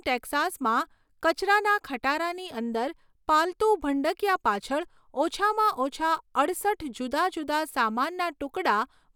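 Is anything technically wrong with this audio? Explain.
No, nothing technically wrong can be heard in this speech recording; the signal stays stable and intact throughout, with no audible defects in level, continuity or frequency content.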